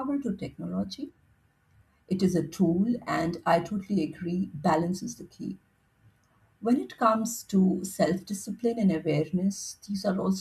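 Nothing stood out as a technical fault on listening to this speech recording.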